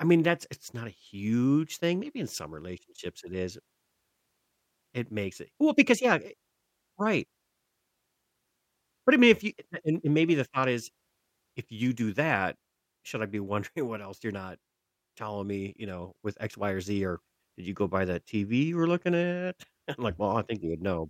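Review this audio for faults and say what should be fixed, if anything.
No faults can be heard in the audio, so nothing needs to be fixed.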